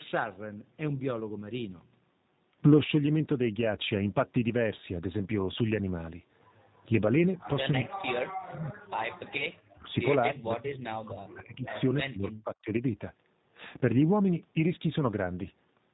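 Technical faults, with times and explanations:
Throughout, G.729 codec: the speech has the plainly audible rough, slightly synthetic texture of a low-rate filter-and-pulse coder, with nothing above 4 kHz, which fits G.729A at 8 kbit/s. Unlike a simple band limit, the damage is to the texture itself, not just to the treble.
9.38 to 9.45 s, VoIP packet loss concealed by the speech codec: a brief stretched-out smear where the decoder stretched its last pitch and filter over a gap that fits a single lost 10 ms frame. The weakened sound lingers for about 70 ms while the coder's memory recovers, rather than a clean dropout.
9.66 to 9.93 s, 10.3 to 11.67 s and 12.05 to 12.82 s, speech suppressed in double talk: the speech dips by up to about 40 dB. The likely cause is an echo canceller ducking the near talker while the far side spoke. These gain cuts follow the other party's activity, unlike the frame-level distortion of lost packets.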